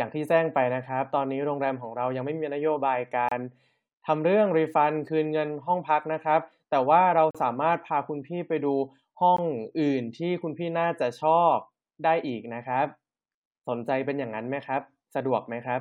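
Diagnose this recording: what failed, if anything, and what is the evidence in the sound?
Hard-edged silent holes cut the speech at 3.29–3.32 s, 7.31–7.35 s and 9.37 s, lasting 30, 38 and 18 ms. This is a gap between stream segments at playback. The time stamps of adjoining 2-second segments leave a hole that the player fills with silence, adding time without losing audio.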